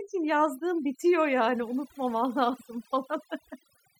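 Overdone noise removal runs through the whole recording. The noise reduction was set too aggressively, so frequency bands sitting near the noise estimate are pushed down or removed, taking quieter speech detail with them. The background drops and breaks up into twinkling specks.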